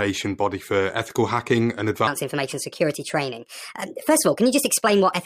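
From 2.07 s, right after "for ethical hacking and", the speech jumps into a section at the wrong speed and stays there to the end. It's playing about 1.37 times too fast, so the pitch rises by roughly five semitones along with the tempo. The voice suddenly sounds higher and rushed. The likely cause is that this stretch got fitted to the wrong clock somewhere in editing or playback.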